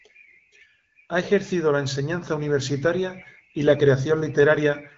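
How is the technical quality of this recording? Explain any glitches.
No glitches are audible here.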